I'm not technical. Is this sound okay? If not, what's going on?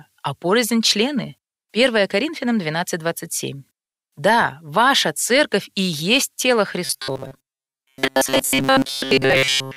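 No. From about 6.85 s, right after "церковь и есть тело", until the end, the speech turns into a stiff, metallic buzz locked at one pitch, about 133 Hz, while still roughly following the speech. This is robotic sound from repeated short buffers. The likely cause is new audio arriving too slowly, so the software kept replaying a tiny slice of roughly 7.5 ms in its place for most of that stretch, and the repeating slice creates the buzz.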